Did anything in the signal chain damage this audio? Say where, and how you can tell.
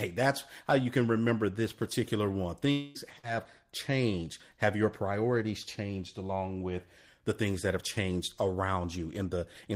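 Yes. At 2.71 to 2.98 s the speech gives way to a buzzy continuation of the last sound lasting about a quarter of a second, and the audio resumes with that stretch gone. This is likely a long network dropout, where the receiver extrapolated rather than falling silent. Unlike a buffer glitch, the continuation fades instead of clicking or repeating.

At 3.19 to 3.26 s there is a brief smear of about 45 ms, where the decoder patched roughly 40 ms of missing packets by extending the preceding sound and then blending back. This short concealed packet loss, also network-side, is far shorter than the earlier gap and never decays into near-silence.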